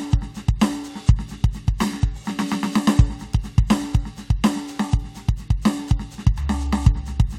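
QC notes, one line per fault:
No faults turned up anywhere in this music clip, so there's nothing to log for it.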